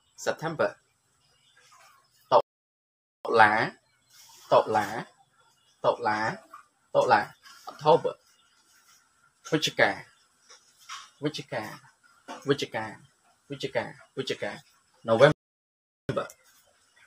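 At 2.41 s the sound stops dead for 0.84 s, then resumes at 3.25 s. A second playback stall runs from 15.32 s to 16.09 s, lasting 0.77 s. Each silence cuts in mid-flow. The player likely ran short of data or was blocked.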